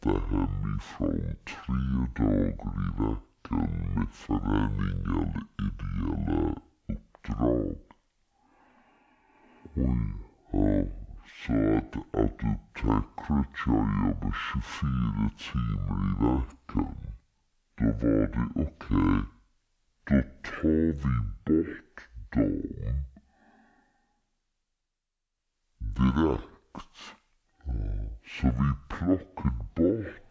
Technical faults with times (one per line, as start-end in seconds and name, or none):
0.00-30.31 wrong sample rate